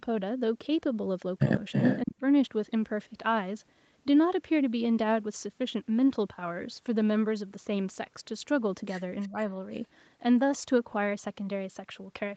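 From 1.72 to 2.0 s, an echo leak, likely from an echo canceller that failed to remove loudspeaker sound, returns a copy of the speech 325 ms late at about the same level as the speech. Right after, from 2.03 to 2.22 s, speech is suppressed in double talk, likely because the canceller mistook the talker for echo. The speech dips by about 20 dB, with around 150 ms of it swallowed. At 9.21 to 9.29 s a faint echo leak returns at the same 325 ms delay, about 30 dB down. From 9.27 to 9.35 s a smaller double-talk suppression dips the speech by about 10 dB for roughly 70 ms.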